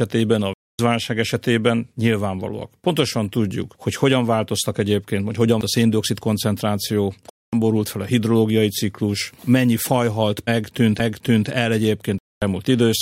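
Bluetooth dropout at 0.53 to 0.79 s, 7.30 to 7.53 s and 12.19 to 12.42 s breaks this speech recording into silence three times, for about a quarter of a second each (255 ms, then 232 ms twice). The speech comes back further along rather than where it stopped. That is the likely signature of wireless packets arriving too late for the headphones and being discarded. The CD skip at 5.61 s and again at 10.99 s brings a mute of only a few milliseconds, after which the audio carries on from a different point. This happens when the laser jumps onto another turn of the disc's spiral and the player resumes reading from there.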